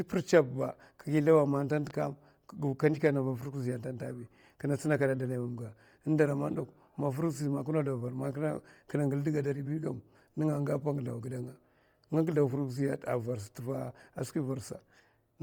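Throughout the speech, heavy Bluetooth LC3 compression, likely at about 32 kbps with 10 ms frames, replaces upper detail with noise fill, giving a grainy, breathy hiss rather than dull muffling. At 1.90 to 1.93 s a single loud pop, likely a voltage pulse, jumps roughly 5 dB above the speech, a brief thump rather than repeated clicks.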